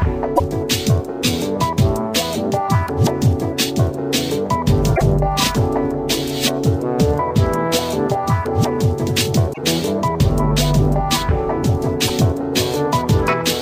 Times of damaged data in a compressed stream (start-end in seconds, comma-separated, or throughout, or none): 0.35-0.41, 4.93-5.02, 9.50-9.58, 12.07-12.10